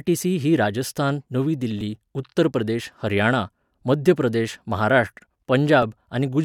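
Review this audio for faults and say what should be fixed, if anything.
Overlapping chunks at 1.81 s, 3.82 s and 5.83 s: the audio is handled in 2.0 s chunks. Each new chunk starts about 7 ms early, so that sliver plays twice and clicks at every join. The first join falls after "ही राजस्थान नवी", the second after "उत्तर प्रदेश हरियाणा", and the third after "हरियाणा मध्य प्रदेश महाराष्ट्र". To prevent it, make each chunk begin exactly where the previous one ended, or crossfade any overlap instead of playing it twice.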